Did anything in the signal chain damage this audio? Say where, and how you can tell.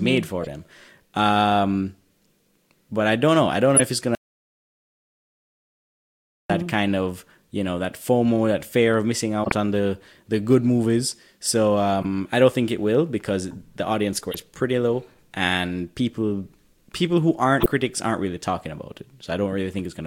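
Yes. Corrupt frame decoded faults come from the codec stage: damaged compressed frames were decoded and played anyway. There are six short bursts, at 0.41–0.47 s, 3.75–3.82 s (after "don't know I don't", before "if it's"), 9.44–9.52 s (after "that fear of missing", before "on the the good"), 12.02–12.05 s (before "I don't think it"), 14.31–14.35 s and 17.60–17.66 s. Each covers only a few frames and sounds like a chirp or blip. The ones at 3.75 s and 9.44 s are the strongest. On a spectrogram each shows as a frame-wide block of energy at implausible frequencies. The waveform shows a brief spike out of keeping with the speech around it.

The audio dropout to silence runs from 4.15 s to 6.50 s, so about 2.35 s of speech is missing. The sound stops mid-flow and resumes abruptly. The gap holds no room tone at all. The waveform sits as a flat line of silence, and the spectrogram is a fully black band with no noise floor. 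That points to the capture or link stage rather than the codec, with the likely cause a lost input while the recorder kept writing silence.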